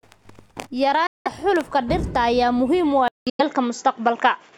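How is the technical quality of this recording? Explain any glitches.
The recording has two clear problems: short gaps in the speech, and a sudden drop in quality near the end.

First, the gaps, at 1.07 to 1.27 s and again at 3.29 to 3.41 s. The sound cuts out for about 186 ms and then about 93 ms, and resumes as if it had kept playing underneath. That's likely a Bluetooth dropout, where packets don't reach the headphones in time and get discarded.

Then from 3.08 s to the end, it sounds like the input switched to a poorer device. There's a silence of about 188 ms at the switch, then the speech turns duller, with nothing above 7.6 kHz, a level change of about 5 dB and a faint new noise floor.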